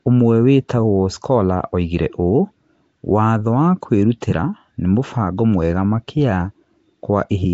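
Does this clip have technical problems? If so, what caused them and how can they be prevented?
Yes. Nellymoser compression affects the speech from start to finish. A rough, hissy halo surrounds the sound, and everything has a smeared, underwater quality. Nothing is heard above 7.7 kHz. The likely cause is Nellymoser Asao, Flash's old microphone codec. It spends very few bits on each sample, so weak bands get none and are refilled with noise. The damage is plainly audible and fits a rate near 32 kbps. To prevent it, capture with a modern codec such as Opus at a generous bitrate.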